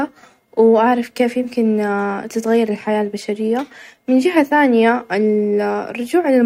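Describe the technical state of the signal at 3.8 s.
At 3.8 s the speech signal is intact, with no audible fault at that moment.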